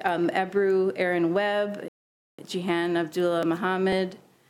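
At 1.88 s the sound cuts to silence for about half a second, resuming at 2.39 s, likely a Bluetooth stall where interference delayed packets and the headphone buffer emptied. From 3.43 to 4.43 s, periodic USB or driver dropouts skip roughly a millisecond of audio every 0.5 s, producing a few evenly spaced ticks.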